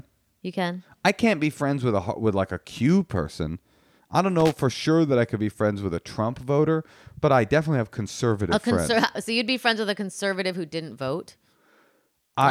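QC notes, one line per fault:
4.40–4.56 s, loose connector crackle, between "person I don't" and "sure that I could". A poor contact rapidly makes and breaks, chopping the speech into irregular scratchy bursts.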